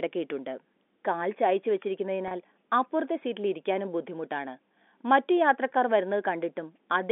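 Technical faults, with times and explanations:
2.28–2.31 s, packet loss with pitch repetition: for about 30 ms the speech briefly hangs on a slightly held, buzzy tone, then carries on. A gap that fits a single lost packet was bridged by replaying the most recent pitch cycle over and over, so the sound freezes on one repeating waveform instead of dropping to silence. The held tone stays within this G.711 line's narrow telephone band, which tops out near 3.6 kHz.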